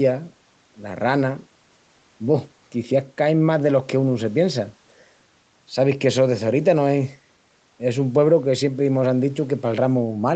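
Nothing stood out on listening to this speech recording, which comes through a call path with its sound limited to below about 8 kHz.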